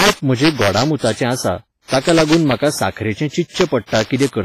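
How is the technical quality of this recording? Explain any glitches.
The recording has two problems running through the whole speech clip: cracks on the loudest moments and heavy codec smearing.

Integer overflow: Across the clip, loud peaks are pushed about 5 dB past the integer limit. Instead of clamping, those samples wrap to the opposite sign. Only a small fraction of samples, well under one percent, are affected, so you hear sharp cracks on peaks, much harsher than ordinary clipping.

Compression: Throughout the clip there's a ringing, washy quality, with hiss that breathes along with the speech, and nothing above 15.2 kHz. The likely cause is heavy WMA compression, which fits a low bitrate of around 24 kbps. Quantisation noise spreads across long transform blocks, and weak spectral detail gets dropped.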